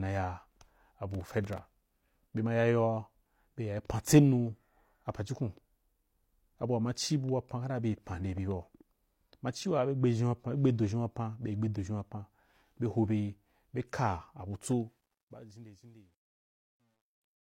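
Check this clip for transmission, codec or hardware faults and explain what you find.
Two faults stand out, one near the start and one on the closing fade.

Processor overload crackle, 1.14 to 1.83 s: the processor missed about twenty of its roughly 3 ms buffers, each dropping to silence, producing gritty, tearing crackle over the speech.

Truncation distortion on a fade, 14.72 to 17.51 s: the fade-out runs at only 11 bits without dither, so its quiet tail turns stepped and gritty, worst from 15.54 s onward.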